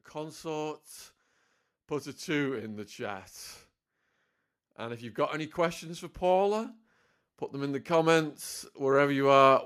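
Automatic gain rising affects this speech recording twice: the gain control judged the input too quiet and ramped its gain up by about 4 dB, from 4.77 to 6.75 s and again from 7.52 to 9.61 s, so voice and background swell together over roughly two seconds.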